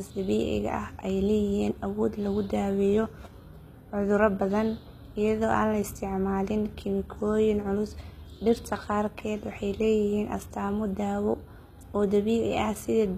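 From start to finish the speech carries a gritty, metallic sheen in its upper range, with s sounds coming out lispy rather than crisp, and nothing at all above about 14.9 kHz. The treble still sounds bright, but it does not sit naturally over the lower voice. This is likely HE-AAC compression at a low rate, consistent with about 20 kbps, where the treble is rebuilt by copying lower bands upward, so its harmonics fail to align.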